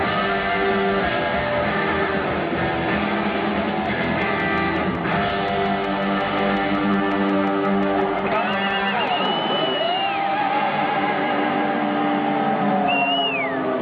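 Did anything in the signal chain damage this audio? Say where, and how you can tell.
Yes. From 3.86 to 9.26 s a train of clicks ticks over the sound at a steady 5.6 per second, about thirty near-identical pops peaking around 5 dB above the audio. The even pacing likely points to electrical interference coupling into the analogue wiring.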